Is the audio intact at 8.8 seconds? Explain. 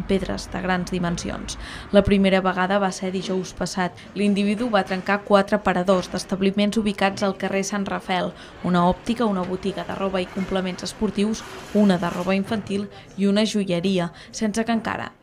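Yes, at 8.8 seconds the audio is intact, with no dropout, click, distortion or other fault to be heard at that moment.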